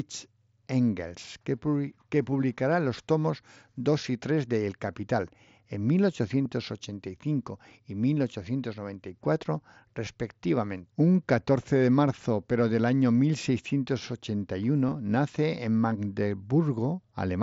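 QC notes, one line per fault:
6.44 s, 10.06 s and 14.88–14.94 s, concealed Bluetooth headset packet loss: short gaps of 15 ms and 7.5 ms are patched from the preceding waveform; the single 7.5 ms loss is nearly inaudible, while the 15 ms run gives a brief buzzy tone. The third, just before "nace en", spreads 30 ms of losses over 60 ms (longest run 15 ms), leaving a buzzy smear.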